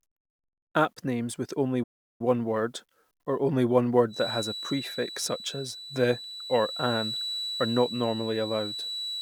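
It's a speech recording with two problems. First, a playback stall at 1.83 s: the audio drops to silence for about 0.36 s and then picks up again at 2.21 s, which points to the player likely running dry of data or having its thread held up. Then from 4.08 s right to the end there's a feedback whistle, a thin steady tone at 3.9 kHz that wavers a bit and sits about 10 dB under the speech. That's likely a speaker-to-mic loop hovering just short of full howl.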